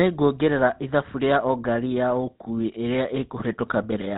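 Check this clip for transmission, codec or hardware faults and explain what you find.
The speech carries one fault from start to finish: GSM full-rate codec damage, plainly audible throughout. The codec models the vocal tract as a filter and excites it with a coarse, regularly spaced pulse train that keeps only every third excitation sample. The result is a buzzy, gravelly roughness, with nothing above 4 kHz, a character that fits the 13 kbps GSM full-rate coder. A simple narrowband telephone filter would sound muffled but smooth rather than rasping.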